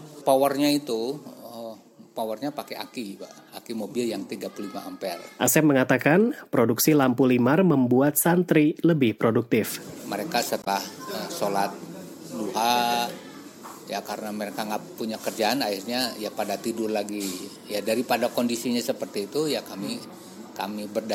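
At about 10.59 s there's a short burst of damaged data in a compressed stream, lasting roughly 80 ms, out to about 10.68 s. A stretch of the encoded file got corrupted, so the decoder couldn't make sense of those frames, lost its place and had to hunt for the next valid frame header before it could carry on. What you hear is a brief glitch cutting into the sound right there before things pick back up.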